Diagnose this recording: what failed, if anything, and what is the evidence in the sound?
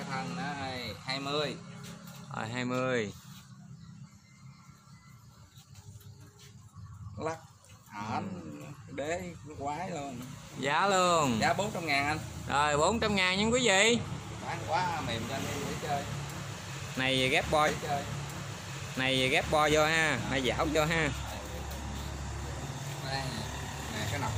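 A stream segment repeated at playback: from 17.67 to 19.67 s, 2 s of the programme plays again after a small blip, an exact replay rather than a dropout or silence.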